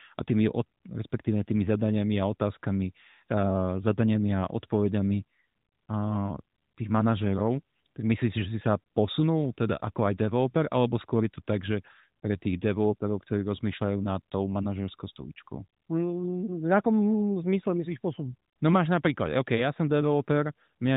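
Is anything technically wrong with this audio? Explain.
No, nothing is technically wrong with this audio.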